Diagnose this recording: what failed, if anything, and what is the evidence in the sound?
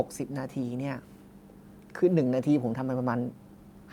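Nothing failed; no fault can be heard in this speech.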